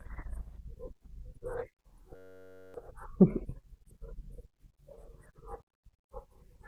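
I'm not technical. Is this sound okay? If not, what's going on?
No. From about 2.16 to 2.74 seconds the speech gives way to a steady buzz. This is a system hang loop: the computer froze briefly while the sound hardware kept replaying the same tiny slice of audio, about 10.7 ms long, which fits a 512-sample buffer. Repeating about 94 times a second, that slice blurs into a hum rather than a stutter. Unlike a dropout, which goes silent, this fills the gap with buzz, and roughly half a second of speech is lost.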